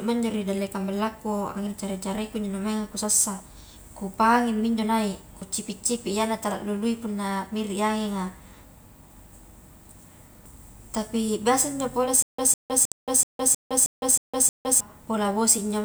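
At 5.42 s a short stretch of the speech drops out, and the sound on either side is spliced straight together with no silence in between. Roughly a third of a second is gone. This is audio missing between chunks, likely from a recorder or processor working in 4-second blocks that loses a slice each time it closes one block and opens the next. Nothing repeats, and nothing is filled in. The sound simply jumps ahead. The same kind of skip happens again at 12.92 s, where it falls inside the stutter described below.

From 12.22 s to 14.80 s the audio turns into a stutter with silent gaps. A fragment about 154 ms long plays, then about 160 ms of dead digital silence follows, and the identical fragment comes back. This happens nine times, at an even pace of one every 0.31 s or so. The cause is likely a playback or stream stall, with each retry replaying the last buffered piece before running empty again. 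What separates this from the chunk skips is that the same material returns over and over with true silence between each return, instead of the sound jumping forward. The speech that should have played during this span is lost.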